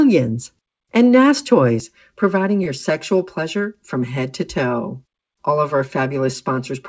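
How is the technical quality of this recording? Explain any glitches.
The recording has two audible faults: a hollow, phasey colouring over most of its length and one brief held sound. The band stops at 8 kHz, as expected from a G.722 call codec at 64 kbps.

From 1.80 s to the end at 6.88 s, the speech turns hollow, with a fixed phasey quality that does not follow the pitch. This is channel delay (comb filtering): one channel runs about 5 ms behind the other, and when the two are summed to mono, shared content cancels at regularly spaced frequencies. The first notch sits around 100 Hz, and the rest follow at evenly spaced intervals above it, hollowing out the spectrum.

Between 2.64 s and 2.69 s, a sound hangs on a moment too long. This is a short stall from a late packet. The jitter buffer ran dry when a packet failed to arrive on time, so the receiver stretched the last audio by about 17 ms to fill the gap, then carried on from the same point. 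Nothing is lost, but the timing slips by 17 ms.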